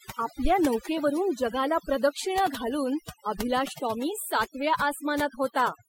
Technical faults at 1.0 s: overdone noise removal; corrupt frame decoded

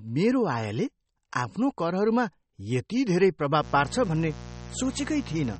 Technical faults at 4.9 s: MP3 compression; mains buzz

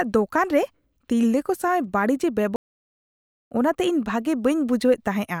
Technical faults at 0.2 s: none

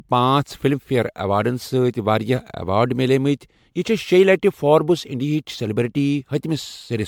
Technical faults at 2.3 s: generation loss

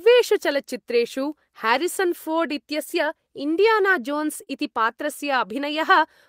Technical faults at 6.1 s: none

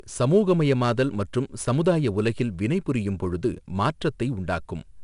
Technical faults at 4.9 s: 4-bit ADPCM compression

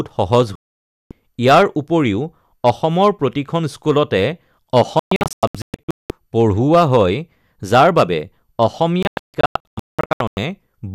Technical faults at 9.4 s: hard clipping; digital broadcast dropout

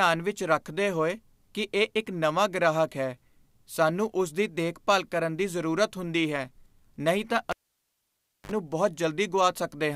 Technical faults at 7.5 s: cable pulled and plugged in

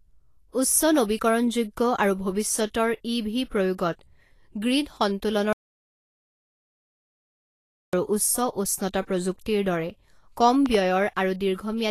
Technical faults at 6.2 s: Vorbis compression; audio dropout to silence

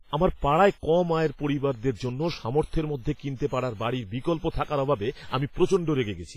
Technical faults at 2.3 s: WMA compression

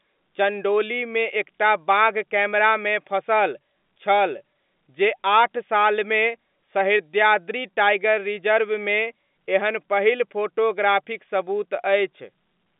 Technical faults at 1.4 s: none

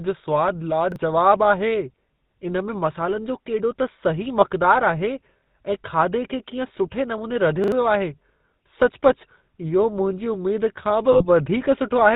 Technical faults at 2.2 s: GSM full-rate codec

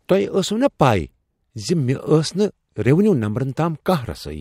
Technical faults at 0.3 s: none

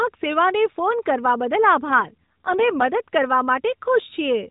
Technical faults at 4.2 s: none

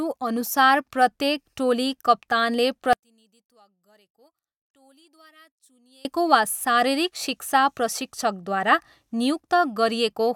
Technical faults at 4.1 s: one channel inverted

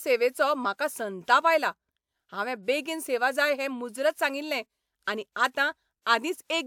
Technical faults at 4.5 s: none

